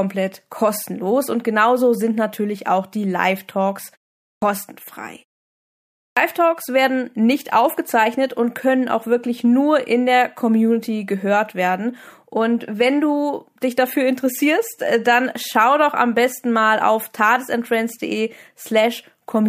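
A speech recording in which two utterances begin abruptly out of silence with their first sounds missing: at 4.31 s, after a 0.43 s pause, about 112 ms is swallowed, and at 6.04 s, after a 0.88 s pause, about 126 ms. This clipped start after a pause comes from the output device sleeping during silence and needing time to wake before sound passes again.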